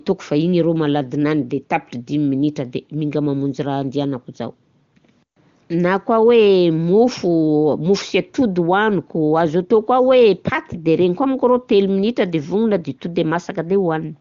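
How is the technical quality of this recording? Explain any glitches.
Nothing glitchy shows up in this recording, so there's really nothing to explain here.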